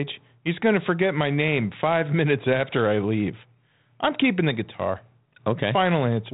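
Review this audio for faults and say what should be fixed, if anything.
No faults turn up in this audio, so nothing needs to be fixed.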